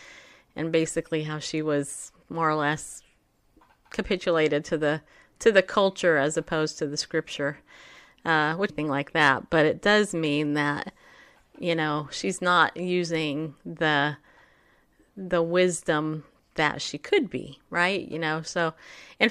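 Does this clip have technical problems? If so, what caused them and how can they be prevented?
Yes. At 8.69 s, just before "like that but it", the speech jumps abruptly ahead with a small blip. This is a stream segment skipped, likely a chunk that failed to load, so the player continued from the next one. The waveform shows a hard discontinuity, and a spectrogram shows a thin vertical click line. Retrying failed segments and keeping a deeper playback buffer would prevent it.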